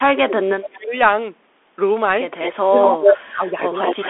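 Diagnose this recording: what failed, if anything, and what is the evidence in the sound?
Throughout, the speech sounds muffled and narrow. Nothing reaches above about 3.8 kHz, and the usable band sits between 300 Hz and 3.5 kHz. S sounds turn scratchy over a grainy hiss. This is the Bluetooth CVSD headset codec: its one-bit, 64 kbit/s up/down coding cannot follow fast high-frequency detail.

From 0.0 to 0.95 s and again from 2.65 to 4.04 s, the speech sinks and breaks up. The drops reach about 30 dB in the first stretch and about 25 dB in the second. This is speech suppressed in double talk, most likely call processing: the echo canceller mistook overlapping talk for echo and attenuated everything.

A delayed copy of the speech trails 208 ms behind the original at 2.40–2.54 s, 2.82–3.13 s and 3.84–4.09 s. It sits about 10 dB below the speech, then about 5 dB above it, then about 5 dB below. 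This is echo leak: the far end's loudspeaker audio likely reached its microphone and slipped past the echo canceller.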